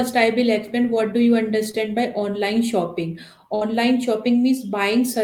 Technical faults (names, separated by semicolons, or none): short concealed packet loss; burst of packet loss